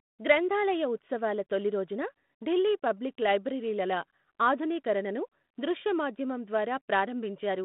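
Nothing stood out on listening to this speech, which is carried over a telephone-band G.726 link at 32 kbit/s working as intended.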